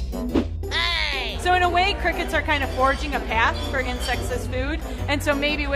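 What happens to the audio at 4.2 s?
A ground loop or nearby transformer is leaking the 50 Hz power line into the signal, so a steady, fairly loud mains hum sits under the sound at 4.2 s, as it does throughout.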